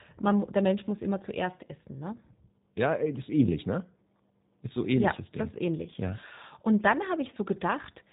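From start to finish the speech carries plainly audible G.729 codec damage, with a band limit and rough, synthetic texture that fit the 8 kbit/s G.729A variant. The codec rebuilds each 10 ms frame from a vocal-tract filter, a pitch predictor and a sparse set of pulses, so fine detail is lost. On a spectrogram, energy stops at a flat ceiling near 4 kHz, with nothing above it for the whole clip.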